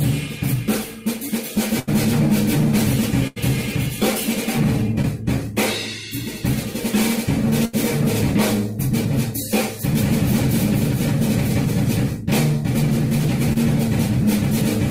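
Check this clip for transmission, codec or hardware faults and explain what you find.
Transmission faults are present: three bursts of packet loss and two shorter concealed packet losses.

Burst of packet loss at 1.79 to 1.89 s, 3.27 to 3.38 s and 7.65 to 7.75 s. Each time about 80 ms of audio failed to arrive in time to play, which fits several consecutive packets going missing. The receiver stretched the last sound it had across the hole for roughly 80 ms, fading it down, so you hear a held buzz or thinning hiss. Playback then jumps ahead, with that stretch of material gone.

Short concealed packet loss at 5.02 to 5.05 s and 13.53 to 13.57 s. Here only about 20 ms went missing. The decoder continued the preceding sound for a moment, from its pitch or as shaped noise, then crossfaded back into the real signal. The fill lasts roughly 14 ms at the first point and 22 ms at the second. Each gap comes across as a brief smear or wobble, and a very short sound at that instant can drop out entirely.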